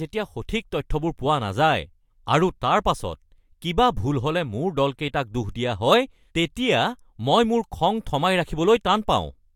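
No technical faults can be heard anywhere in the speech recording. There is no moment in it that needs a time or a description of damage.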